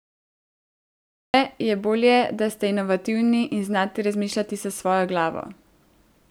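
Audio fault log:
0.00–1.34 s, cut-off start: the capture began late, so the clip holds 1.34 s of digital silence before the speech abruptly arrives mid-sound at "je bolje da ste", with no natural attack or fade-in, as if its opening had been sliced off.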